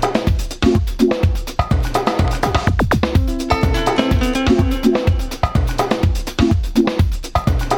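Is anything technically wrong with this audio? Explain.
No, no technical faults audible.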